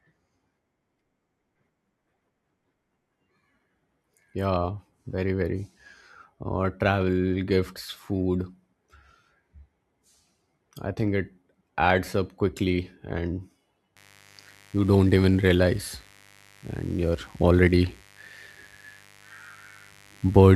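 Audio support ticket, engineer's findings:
Mains buzz from 13.96 s to end of clip. Steady raspy buzz about 30 dB below the speech, 50 Hz based. Probable source: dimmer, rectifier or unshielded line coupling in switching spikes twice per mains cycle. Distinct from plain hum: harmonics extend into the kHz range, giving rasp rather than a smooth low tone.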